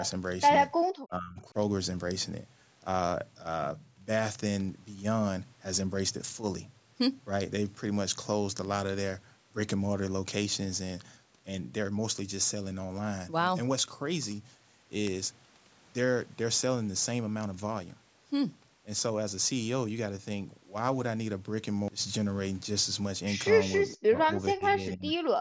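From 0.30 s to 25.35 s, sharp word clock ticks recur roughly every 0.3 s, around 70 in all. The receiving device runs on its own clock, off the sender's by something like 70 ppm, so each time the clocks slip, one sample is dropped or repeated.

Between 1.08 s and 1.55 s the speech dips by up to about 20 dB. This is likely speech suppressed in double talk: with both sides talking, the echo canceller could not tell the near talker from loudspeaker echo and turned the signal down.

The same suppression returns far more heavily from 23.94 s to 25.06 s. For most of that second the speech dips, at worst about 35 dB down.

Right after, from 25.07 s to 25.12 s, a brief echo leak appears. A scrap of the speech returns 423 ms late and about 35 dB below the speech, likely because the loudspeaker side's echo canceller let some of its loudspeaker pickup through. The audio has nothing above 8 kHz, as expected from call microphone processing.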